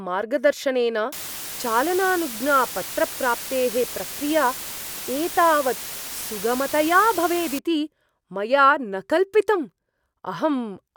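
From 1.12 to 7.59 s the speech carries low bit depth with dither. The audio is reduced to what sounds like about 5 bits, with dither randomising the rounding error. The result is a steady, even hiss, loud and not far below the speech, with no gritty distortion following the signal, which is what separates it from undithered truncation.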